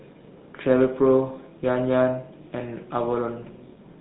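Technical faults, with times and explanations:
Throughout: GSM full-rate codec. The speech has that buzzy, gravelly roughness you get when the vocal tract is modelled and driven by a coarse, regularly spaced pulse train, and nothing comes through above 4 kHz. It's plainly audible and fits the old 13 kbps full-rate coder.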